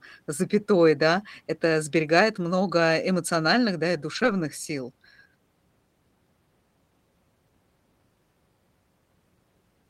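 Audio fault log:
2.33 s and 4.15–4.33 s, lost packet rebuilt from error correction: the audio continues without a gap, but each span turns briefly rough and grainy, once just after "запятой да это" and again, for about 100 ms, right after "много эмоциональных да и". The decoder played the lower-bitrate backup copies carried in the following packets. On a spectrogram, these spots show smeared, noisier texture. The waveform stays unbroken.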